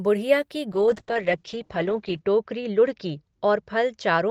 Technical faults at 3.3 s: call bitrate drop

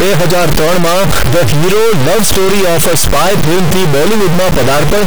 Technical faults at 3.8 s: stuck bit

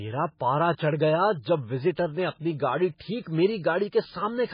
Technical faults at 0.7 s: MP3 compression; pre-echo

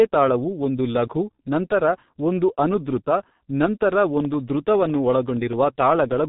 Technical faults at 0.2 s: G.723.1 codec

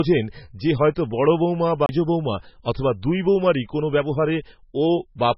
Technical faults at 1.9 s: MP3 compression; CD skip

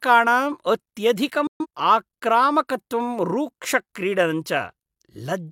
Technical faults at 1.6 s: digital broadcast dropout

